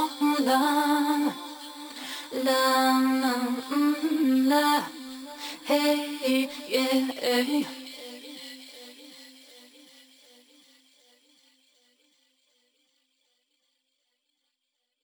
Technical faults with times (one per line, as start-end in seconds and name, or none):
0.00-15.04 imaging from sample-and-hold upsampling